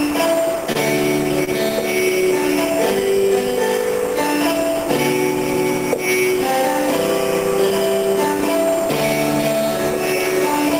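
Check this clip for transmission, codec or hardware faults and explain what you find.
There are two short stalls from a late packet, around 0.72 to 0.77 s and again around 1.44 to 1.49 s. Each time a packet didn't turn up when due, the jitter buffer ran dry, and the receiver stretched the last bit of sound, for 26 ms and then 27 ms, until the packet arrived and playback resumed from the same spot. Nothing is lost, but the sound hangs for a moment with a brief buzz or dip, and the overall delay grows by those amounts each time.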